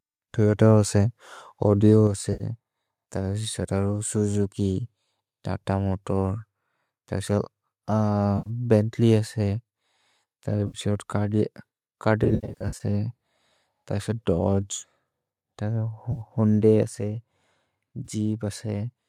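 At 2.07 s the whole signal, voice and background together, drops by about 4 dB in a single step, likely a microphone volume stepped down by the call software reacting to input it judged too hot. The same one-step drop of about 4 dB recurs at 16.83 s.

AAC frame loss with concealment produces short smeared, noisy patches where the decoder rebuilds missing frames from the last good spectrum. These occur at 2.33–2.44 s (70 ms), 8.38–8.50 s (80 ms), 10.67–10.78 s (70 ms), 16.12–16.21 s (50 ms) and 18.05–18.07 s (20 ms). Between 12.24 and 12.83 s, about 340 ms goes missing in scattered gaps of up to roughly 70 ms each.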